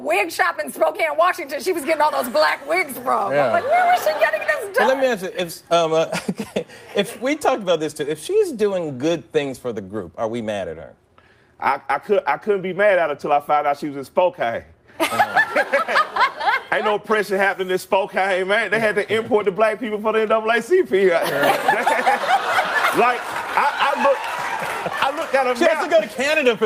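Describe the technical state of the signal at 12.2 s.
At 12.2 s the signal is intact, with no dropout, clipping, glitch or other technical fault to be heard at that point.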